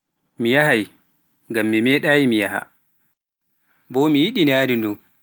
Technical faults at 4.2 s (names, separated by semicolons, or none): none